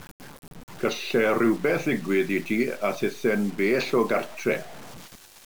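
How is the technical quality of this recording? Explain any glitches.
The technical quality is poor: a grainy distortion runs through the whole speech clip. It is low bit depth without dither, likely from truncating the audio to about 6 bits. With so few steps, rounding error tracks the waveform, so the grit sits only about 20 dB below the speech, roughening quiet syllables and making decays sputter or cut to silence. Unlike dithered hiss, it vanishes in silence and changes character with the sound.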